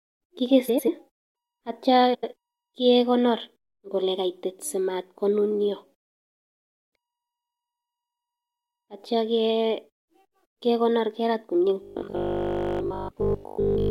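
At 0.68 to 0.89 s and again at 2.14 to 2.34 s, the frames arrive out of order: two neighbouring runs of about 93 ms each, which fits four frames apiece, play in swapped order. Each stretch sounds like a garbled flutter, and a spectrogram shows abrupt vertical seams where the speech contours break and restart.

From 11.82 s to the end, the speech turns into a rigid, metallic buzz at a fixed 50 Hz. This is likely robotic sound from repeated short buffers, with roughly 20 ms of audio looped throughout. The waveform shows identical repeating cycles, and the spectrogram shows even harmonic stripes every 50 Hz.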